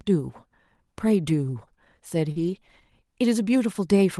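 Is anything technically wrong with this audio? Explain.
Yes. The speech shows two kinds of transmission fault. Everything passes through an Opus call path, and its spectrum stops at about 12 kHz, with coding noise that fits a bitrate around 32 kbps.

Lost packet rebuilt from error correction, at about 1.29 s and again from 2.36 to 2.58 s. Audio went missing in transit, but the packet after each loss carried a coarse low-bitrate copy, and the decoder played that copy instead of leaving a hole. The first event is a single 20 ms frame. The second spans 120 ms, which fits about six separate lost packets. There is no dropout. The rebuilt stretch sounds grainier and noisier. On a spectrogram these regions show blurrier harmonics and a speckled noise floor. The waveform stays continuous.

Short concealed packet loss, from 2.31 to 2.38 s and from 2.60 to 2.63 s. About 40 ms and then about 20 ms of audio arrived too late to use. 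The receiver extrapolated from the preceding sound, extending its pitch or filling with shaped noise, then crossfaded back into the real signal. Each event is heard as a brief smear or wobble.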